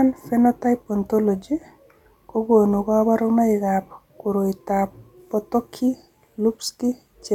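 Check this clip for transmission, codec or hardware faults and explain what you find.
No transmission, codec or hardware faults.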